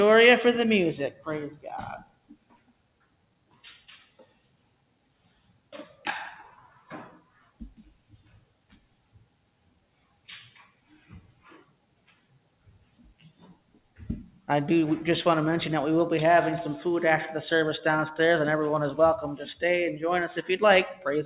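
A noise suppressor meant for speech stays active across the whole clip and treats held tones, ambience and decaying tails as noise. Its gain swings by roughly 20 dB, so sustained material sinks while attacks pass through, giving a pumping, fluttering, thinned-out quality. Through all of it the band stops at 4 kHz, which fits a G.711 A-law call path at 64 kbps.

The sound cut by the noise suppressor shows up as seven dips: 2.03 to 3.63 s (down about 14 dB), 4.08 to 5.72 s (about 13 dB), 7.19 to 7.6 s (about 12 dB), 7.94 to 10.28 s (about 14 dB), 10.65 to 11.46 s (about 11 dB), 11.62 to 13.99 s (about 13 dB) and a brief one at 14.31 to 14.48 s (about 11 dB). In each one the suppressor misjudges steady or fading content as noise and pulls it down, so the sound sags or its decay is chopped short.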